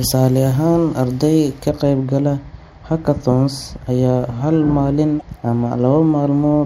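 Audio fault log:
1.69–6.65 s, de-emphasis applied wrongly: from just after "ahaan arday ka" the speech turns dull and muffled, a treble cut of about 13 dB at 10 kHz sloping smoothly downward.
5.17–5.22 s, damaged data in a compressed stream: a brief glitch as corrupted frames are misread and the decoder loses sync, hunting for the next valid frame header.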